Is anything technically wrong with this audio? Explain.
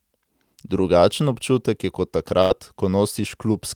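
Yes. There is a burst of packet loss from 2.41 to 2.53 s. A short run of speech data went missing or arrived too late to play. The receiver covered the gap by stretching the last sound for about 88 ms and letting it fade. It sounds like a brief held buzz or dying hiss in place of real speech. Then the speech resumes with about 60 ms skipped. Everything after plays roughly 28 ms later than before.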